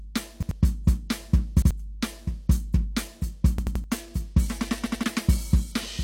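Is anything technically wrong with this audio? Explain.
Yes. The music stutters at 0.43–0.51 s and 1.62–1.71 s (one repeat each), 3.58–3.84 s (three repeats) and 4.86–5.04 s (two repeats). Each repeat is an 85 ms slice played again with a hard join. This is a repeated buffer: new audio arrived late, so the device replayed its last block, which fits a 4096-sample buffer, and a short stretch of music is skipped each time.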